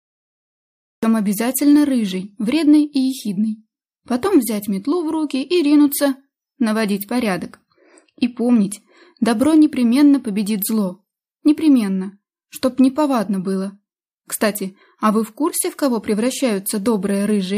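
The clip opens with a cut-off start: digital silence runs from 0 to 1.03 s, then the audio enters abruptly, already mid-sound. Capture or streaming began late, so the onset was never recorded and there is no natural attack or fade-in.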